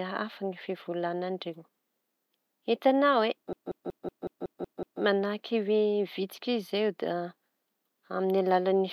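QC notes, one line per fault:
3.53–5.02 s, system hang loop: the speech freezes into one 186 ms fragment repeated eight times, a machine-gun stutter at about 5.4 per second, which fits an 8192-sample buffer being replayed while the system stalled. Little to no audio appears lost. On the waveform, identical blocks tile the span; on the spectrogram, the same short pattern stamps out at even spacing, with sharp vertical seams at each repeat boundary.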